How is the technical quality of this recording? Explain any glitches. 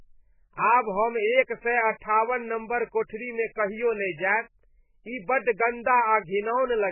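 Poor: heavy MP3 compression damages the speech throughout. Nothing sounds above about 2.9 kHz, so it is dull and muffled, with a watery, swirly texture and smeared onsets. This is likely from MP3 coding at a very low bitrate, around 8 kbps, where the encoder discards the treble and drops weak frequency lines that flicker between frames. A spectrogram would show a hard ceiling at 2.9 kHz with patchy, blocky gaps below, and the waveform would show softened attacks.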